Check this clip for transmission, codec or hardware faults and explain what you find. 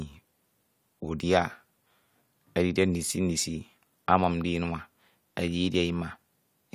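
No faults can be heard anywhere in the speech. There is nothing further to report.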